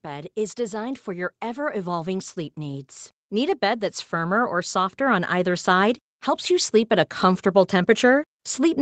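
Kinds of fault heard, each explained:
Automatic gain rising: The gain control decided the input was too quiet and kept turning it up, so from about 0.05 s right through to the end the speech and the background noise swell together in a slow, steady climb.
Lost packet rebuilt from error correction: Around 3.47 to 3.53 s there's no dropout, but about 40 ms sounds rougher and noisier. That fits two lost 20 ms packets patched from the low-bitrate copies that Opus tucks into the following packets.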